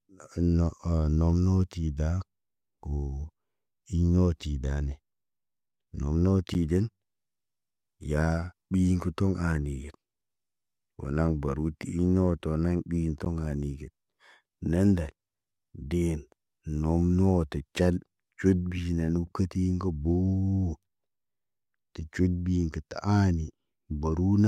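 Speech, where the output buffer twice went unfilled in time, dropping a block of digital silence of about 10.7 ms, which fits a 512-sample buffer, at 6.54 s and at 13.25 s just after "iŋg noto naŋg ɓi". Each heard as a tick or dip.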